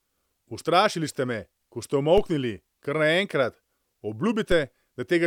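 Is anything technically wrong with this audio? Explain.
Yes, two DC steps. At 2.18 s, just after "ko ste", and again at 4.52 s, the waveform's zero line jumps by about -18 dBFS, then relaxes through a 5 Hz high-pass, giving a low thump each time.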